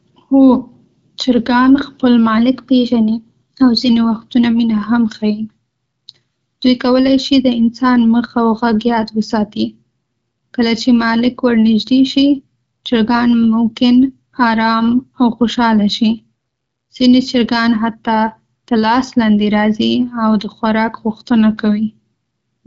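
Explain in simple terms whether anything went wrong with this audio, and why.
Nothing went wrong here.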